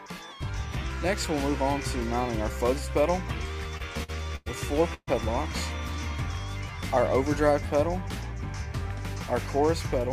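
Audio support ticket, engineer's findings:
Repeated stalls (stutter), 3.77–4.48 s: five gaps, longest 103 ms, bridged by held sound; jitter buffer running dry. Spectrogram: repeated frozen, smeared bands; nothing missing, timing drags.

Call audio freeze, 4.94–5.09 s: last sound held, fading, about 50 ms silent; likely delayed packets emptying jitter buffer. Waveform: decaying tail, flat stretch, 133 ms added delay.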